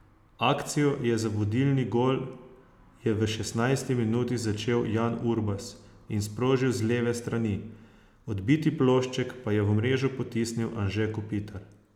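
No audible technical faults.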